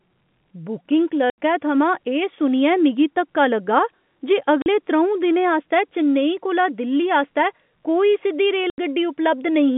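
Packet loss filled with silence cuts the speech at 1.30 s, 4.62 s and 8.70 s: holes of 80, 40 and 80 ms with hard edges. The sizes, multiples of 20 ms, point to 20 ms packets dropped and replaced by silence, over a telephone-band G.711 line.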